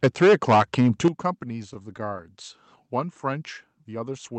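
From 0.03 to 1.08 s the loudest syllables carry a harsh, crackling edge, with the tops of the waveform flattened on around a tenth of the samples. This is most likely microphone overload. The input level was set so high that the peaks pushed about 10 dB past the converter's ceiling, and everything above that limit was sliced off, adding distortion on every strong peak.

At 0.07 s the whole sound drops about 4 dB in one sudden step. At 1.08 s, where the crackling ends, a much larger drop of about 11 dB follows. These are the likely result of the microphone volume being stepped down. The call software noticed the clipping and lowered the device's input gain, first modestly and then decisively, so voice and background fall together.

Between 1.39 and 2.21 s the speech drags and stutters. Eight brief hitches interrupt its flow, the longest about 15 ms, together adding roughly 76 ms of stretched sound, and nothing is lost. 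These are repeated stalls. Packets arrived late, so the jitter buffer kept running dry, and each time the receiver prolonged the last sound until fresh audio came in. The band-limited tone of the call path, topping out around 8 kHz, fits Opus at about 40 kbps.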